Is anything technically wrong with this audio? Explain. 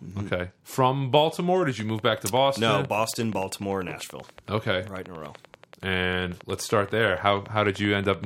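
Yes. A train of clicks runs from 1.70 s to 8.25 s: a steady series of near-identical pulses, regularly spaced at 10.4 per second, some 70 in all. Something is injecting a short impulse into the signal at a fixed rate, likely electrical interference from nearby equipment or a faulty connection or power supply. It is heard as a brisk, even ticking, its peaks somewhat louder than the speech, persisting through the pauses as well.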